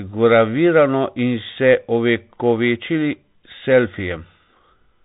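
Bluetooth CVSD headset codec damage runs throughout the speech, from start to finish. The audio has been squeezed through a narrowband headset link, one bit per sample deciding only whether the signal steps up or down, which fits a 64 kbps stream. Nothing above 4 kHz survives, so the voice sounds boxed in. Loud, bright moments outrun the adaptive step and smear, s sounds turn scratchy, and a granular hiss sits plainly beneath everything.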